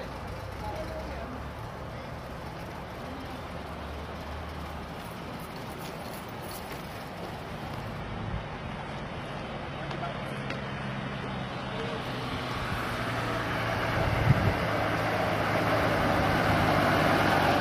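At 8.0 s the stream switches down to a lower bitrate. A slowing connection forces the player onto a much leaner encoding until 12.0 s, one that fits a drop from around 96 kbit/s AAC to roughly 16 kbit/s HE-AAC. The change is abrupt but seamless. The top end thins and cuts off above 11.8 kHz, and compression artefacts rise until full quality snaps back.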